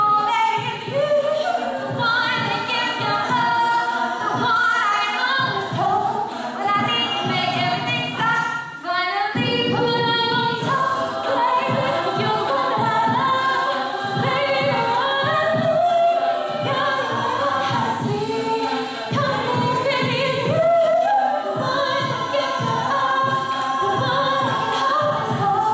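Nothing here trips any alarms; the audio runs along without a single technical hiccup worth pointing to.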